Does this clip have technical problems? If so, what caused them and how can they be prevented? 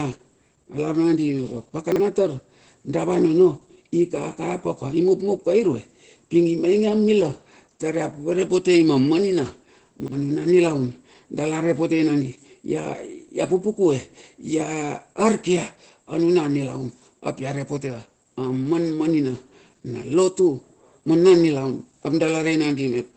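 Yes. Opus voice compression runs through the whole speech clip. Nothing is heard above about 8.5 kHz, and the voice sounds muffled, hoarse and slightly robotic. This points to the SILK coder at roughly 12 kbps, coding the excitation coarsely. Prevent it by encoding at a higher bitrate.

Chunks out of order occur at 1.92 to 2.0 s and at 10.0 to 10.12 s. Each is a brief jumbled moment. At 1.92 s, a 40 ms chunk plays one chunk late. At 10.0 s, after "ia poropotei ma manina" and before "nilaun dala repotei nandi", a 40 ms chunk plays two chunks late. Prevent it by sequence-numbering chunks and reordering them before playback or writing.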